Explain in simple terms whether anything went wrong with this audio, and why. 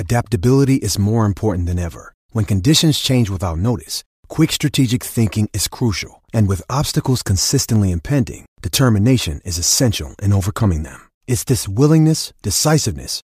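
Dropped samples, most likely: a tiny sliver of the speech, a fraction of a millisecond, went missing, making sharp clicks at 7.76 s, just before "impending determination is essential", and at 11.55 s.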